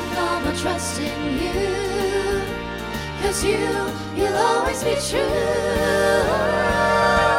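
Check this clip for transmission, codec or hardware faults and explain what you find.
No transmission, codec or hardware fault can be heard anywhere in the clip; the signal stays continuous and stable throughout.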